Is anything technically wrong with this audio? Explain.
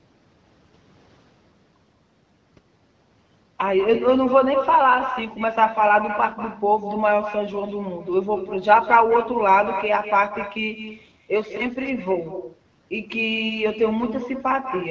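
Yes, there is one fault. Echo with no canceller runs through the whole clip. At the far end the call plays through a loudspeaker, that microphone picks it back up, and nothing subtracts it, so the speech returns after the network round trip. Here every phrase is trailed by a copy about a fifth of a second later and about 11 dB quieter, sounding thinner, like a faint second speaker repeating everything just behind the first.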